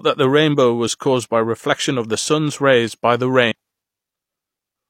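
CD skip at 3.52 s, just after "sun’s rays by the": the laser jumps tracks, giving a brief tick and a few milliseconds of mute before the speech resumes elsewhere.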